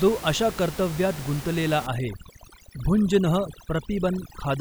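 Overdone noise removal runs from 1.87 s to the end at 4.61 s: an over-aggressive denoiser shuts off frequency bands near its noise estimate, leaving twinkling specks where room noise had sat about 15 dB below.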